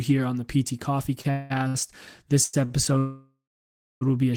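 Late packets drained the jitter buffer in this speech clip at 1.21 to 1.27 s, 1.68 to 1.88 s, 2.44 to 2.55 s and 2.65 to 2.72 s, causing a short stall from a late packet each time. The receiver held the last sound for about 32, 61, 97 and 49 ms, giving brief drawn-out sounds with a slight buzz or dip before resuming where it stopped. The last of these falls just before "will be a short".

From 1.31 to 1.52 s, a call audio freeze was likely caused by packets held up in transit. The buffer ran dry and the last sound was stretched for 195 ms as a fading buzz or hiss, with nothing lost.

A longer call audio freeze follows from 2.98 to 4.03 s, again ending just before "will be a short". The receiver extended the sound for about 1.03 s, and about 650 ms of that sits in silence before the speech picks up from where it left off.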